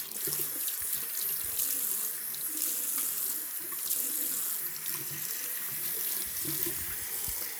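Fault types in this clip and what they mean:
Nothing in these sounds catches the ear as a technical fault, so there's no fault type to list here.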